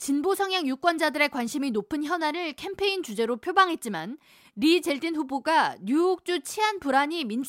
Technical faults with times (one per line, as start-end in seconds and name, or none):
none